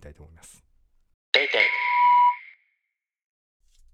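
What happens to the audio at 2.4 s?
At 2.4 s a loudspeaker feedback squeal, running from 1.53 s, comes to an end. The microphone was picking up its own loudspeaker, and at 980 Hz the loop gain exceeded one, so that tone fed on itself, swelling over about half a second into a piercing whistle roughly 10 dB above the speech. On a spectrogram it shows as a single bright horizontal line at 980 Hz. The waveform envelope swells into a dense, steady sinusoid that stops at 2.40 s.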